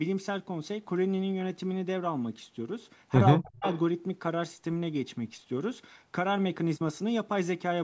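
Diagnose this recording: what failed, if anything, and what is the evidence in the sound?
From 3.37 to 3.64 s the speech sinks by roughly 40 dB and partly vanishes. This is speech suppressed in double talk at the call-processing stage, likely the echo canceller ducking its own talker. A gain dip like this differs from a packet-loss gap, which is an abrupt hole or a concealment smear.

Right after, from 3.64 to 3.79 s, a faint copy of the speech arrives 226 ms late at about 25 dB below the direct level. This is an echo leak, again in call processing, likely where residual loudspeaker pickup passed the canceller. A distinct repeat at a fixed delay sets it apart from room reverberation, which is a continuous decaying tail.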